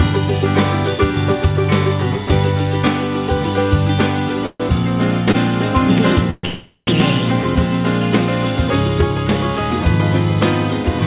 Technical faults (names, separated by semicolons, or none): call audio freeze; short stall from a late packet